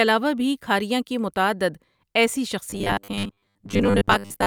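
From 2.70 s to 4.46 s the speech hardens into a metallic buzz pinned at 100 Hz, only loosely following the words. This robotic sound from repeated short buffers likely comes from audio arriving too seldom, so a 10 ms slice loops in place of most of the real signal.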